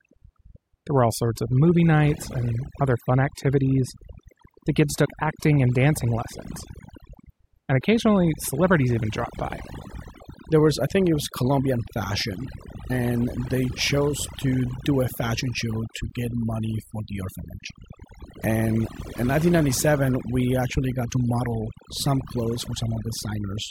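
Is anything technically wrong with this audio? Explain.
Yes. Throughout the speech there is overdone noise removal: a noise reducer set far too aggressively. It pulls individual frequency bands down or shuts them off whenever their level sits near its noise estimate, so the quieter parts of the voice get cut along with the noise. Between phrases the background drops and breaks up into twinkling specks. A plain noise gate would instead mute the whole signal at once, without those scattered specks.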